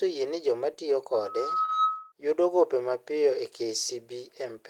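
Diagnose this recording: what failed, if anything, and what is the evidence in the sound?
Loudspeaker feedback squeal in the acoustic path: from 1.13 to 2.12 s a 1.3 kHz tone swells over roughly 0.7 s to about 10 dB above the speech as the mic re-amplifies the speaker.

Short concealed packet loss on the network side: three back-to-back gaps from 1.61 to 1.73 s, each fitting a 20 ms packet, get papered over by the decoder's extrapolation, leaving a brief smear.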